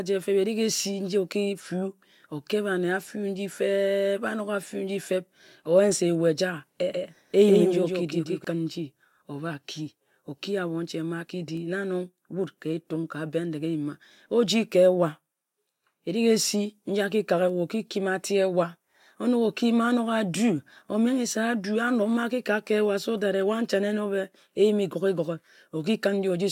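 A speech recording with a doubled audio track from 6.92 to 8.44 s: a full-band copy trails about 150 ms behind, roughly 5 dB quieter, with no reverberant tail, likely from a second, slower capture path. The waveform shows each onset repeated; the spectrogram, shifted duplicate patterns that start and stop abruptly.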